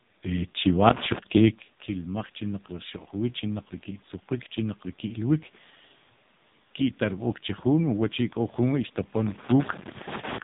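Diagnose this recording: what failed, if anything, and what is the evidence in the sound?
Codec stage: the AMR narrowband mobile codec runs throughout. Nothing passes above 3.8 kHz, and the buzzy, synthetic voice, unlike plain low-pass dulling, suggests a bitrate near 5 kbps.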